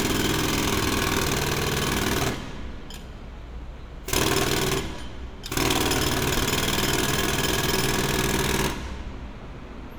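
No technical faults can be heard anywhere in the recording; the signal stays continuous and steady throughout.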